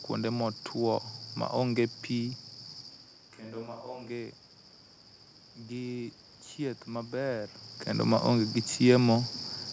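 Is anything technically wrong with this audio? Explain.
Yes. From 2.92 to 4.09 s there is what sounds like a switch to a distant microphone: the close microphone's feed likely dropped out and a farther pickup took over. The speech turns hollow and roomy with thinner bass, at about the same level, while room noise rises to roughly 35 dB below the speech. Throughout the clip, nothing above 8 kHz comes through, consistent with a G.722 call path.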